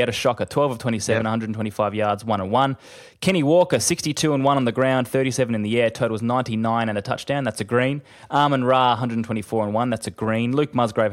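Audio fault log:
3.28–3.92 s and 8.35–8.90 s, hard clipping: the speech peaks overrun a stage's maximum, by about 4 dB in the first stretch and about 2 dB in the second, so their tops are sliced flat. The abrupt corners add high harmonics, heard as brittle crackle on the loudest syllables, stronger in the first stretch. Unlike soft saturation, there is no gradual rounding or warmth. The distortion switches on sharply only where peaks exceed the ceiling.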